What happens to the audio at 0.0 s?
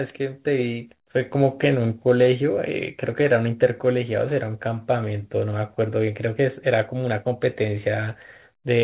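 At 0.0 s the speech comes through intact, with no dropout, glitch or distortion, only the narrowband call path working as it should and leaving nothing above 4 kHz, which fits a 64 kbps telephone codec such as G.711.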